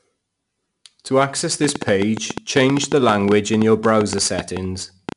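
Each sample of the speech is coded as a 4-bit ADPCM step, leaving gritty, level-following hiss and smeared attacks throughout, with nothing above 10.6 kHz, which fits a roughly 22 kHz rate. From 1.64 to 5.13 s, likely interference injects a train of clicks, around thirty irregular ticks at about 7.5 per second, some 15 dB above the speech.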